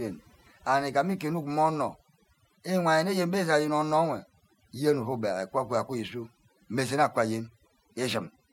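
From start to finish, the speech carries overdone noise removal. A noise reduction process was pushed too hard. Wherever a frequency band sat close to its noise estimate, it cut that band deeply or silenced it. Softer parts of the voice fell below that line and were removed too. The background between phrases drops away, breaking up into twinkling, warbling specks.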